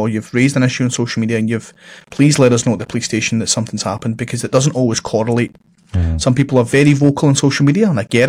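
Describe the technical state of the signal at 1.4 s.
Around 1.4 s the speech signal is intact, with no fault affecting the audio at that moment.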